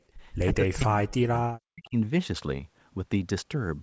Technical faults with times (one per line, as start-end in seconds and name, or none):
0.64-1.38 speech suppressed in double talk
1.69-1.97 speech suppressed in double talk